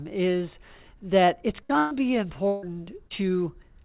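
Short concealed packet loss at 1.25–1.30 s: about 30 ms of the call arrived too late for the decoder, so the receiver continued the preceding sound for roughly 24 ms and blended back, leaving a brief smear. Bursts of packet loss follow at 1.63–1.72 s, 1.78–1.94 s and 2.48–2.65 s, losing 60, 120 and 150 ms. Each gap is bridged by an extended, fading continuation of the last sound, a held buzz or dying hiss, with no silence in the second and third, before the audio resumes further on. A second short concealed loss at 3.07–3.13 s replaces 30 ms with a similar fill. The call path carries nothing above 4 kHz, which fits a 64 kbps G.711 A-law link.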